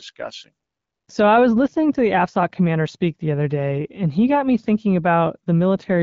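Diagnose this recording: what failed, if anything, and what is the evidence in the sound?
Nothing failed: the speech runs over an AMR wideband (HD Voice) link at a rate that fits 12.65 kbit/s, so the band up to 6.4 kHz stays clear with only the light texture of that codec and the top band up to 7 kHz carries its shaped noise fill, with no fault at any stage of the chain.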